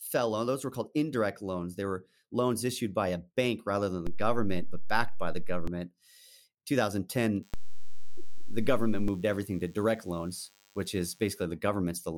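Just after "a bank rather than", at 4.07 s, the zero line of the waveform jumps in a DC step of about -24 dBFS. It holds until 5.67 s and then returns. Each edge lands as a low thump or click while the speech runs on untouched, so it doesn't sound like a dropout or a crackle.

From 7.43 s to 11.42 s a DECT cordless phone buzz sits well below the speech. A nearby handset or base fires a radio burst every 10 ms, and the audio circuit rectifies it into a thin 100 Hz buzz packed with harmonics. It sounds edgier and more rasping than a smooth mains hum. Within it, a second DC step shifts the baseline from 7.54 s to 9.08 s, thumping again at both ends.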